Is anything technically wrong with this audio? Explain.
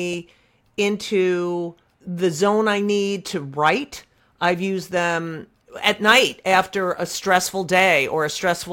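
Yes. From 5.22 s, right after "to write I've used", through to the end at 8.73 s, the audio shows sample clock jitter. The converter's clock wobbles by something like 4 microseconds, so each sample is captured slightly early or late. Where the speech waveform changes fastest, that timing error becomes an amplitude error roughly 30 dB below the signal. It is heard as a grainy hiss that swells on loud and sibilant sounds and drops away in the pauses.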